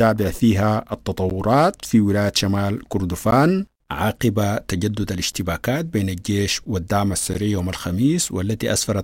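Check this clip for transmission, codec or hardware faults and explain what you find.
The speech has a gap between chunks, occurring four times. The audio was delivered in 2.0 s chunks, and each join left about 13 ms of silence. Nothing is lost, but the sound stops dead at 1.30, 3.31, 5.32 and 7.34 s. Each is a brief hole, recurring about every 2 s with a regularity that exposes the chunk boundaries.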